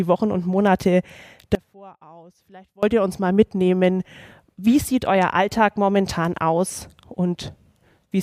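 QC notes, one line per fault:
1.55 to 2.83 s, audio dropout to a faint residue: the wanted signal was most likely lost somewhere upstream while the path after the break stayed live, so for about 1.28 s the level collapses abruptly rather than pausing or fading. What remains in the gap is a faint leak of the sound, roughly 25 dB below its normal level, before the full signal snaps back in mid-flow at 2.83 s.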